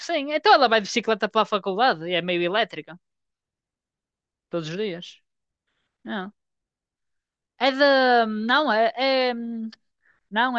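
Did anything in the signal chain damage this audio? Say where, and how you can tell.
No, nothing along the chain seems to have harmed this speech recording, so there's no stage to point a finger at.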